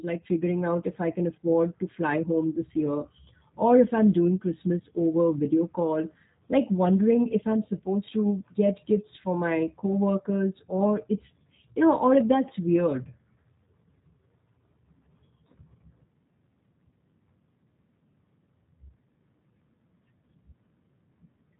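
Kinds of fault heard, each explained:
G.729 codec: speech rebuilt from a filter, pitch and sparse pulses at about 8 kbit/s sounds rough and synthetic; the spectrogram shows nothing above 3.8 kHz.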